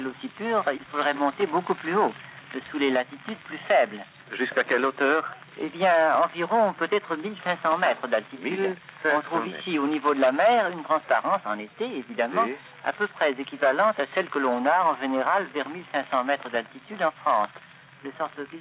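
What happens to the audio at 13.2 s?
Gain pumping runs through the whole clip, including 13.2 s: the gain swings by around 10 dB and the sound is squashed, likely from excessive input gain driving a fast limiter.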